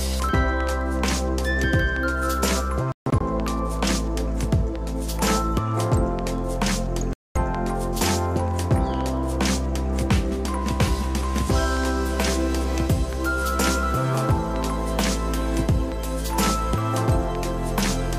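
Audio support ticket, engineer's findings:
Output cuts to silence 2.92–3.21 s: clustered gaps across about 284 ms, 183 ms missing in total, longest hole 142 ms. Audio resumes further on with no catch-up. Likely Bluetooth dropout, packets arriving late at headphones and discarded.

Second silent hole 7.13–7.36 s, about 224 ms, sound continues as if it had played through. Same Bluetooth dropout pattern; gap length points to a short run of consecutive lost packets.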